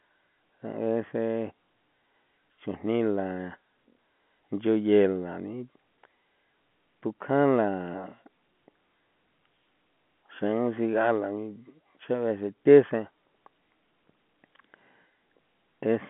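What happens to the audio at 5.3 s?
Nothing goes wrong at 5.3 s: the speech carries on intact through that moment, with only the usual narrow telephone band of G.711 coding, which passes nothing above about 3.8 kHz.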